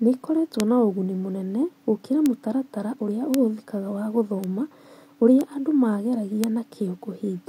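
Speech clip with six bit error spikes: sharp, isolated ticks at 0.60, 2.26, 3.34, 4.44, 5.41 and 6.44 s, the one at 2.26 s landing right after "na ũguni mũnene gũkĩra". Each is a single flipped bit in memory or a digital link throwing a sample or a few up by a power of two and straight back, so you get a broadband click unrelated to the speech. Most peak around -3 dBFS. The 4.44 and 5.41 s ticks are softer, around -9 dBFS.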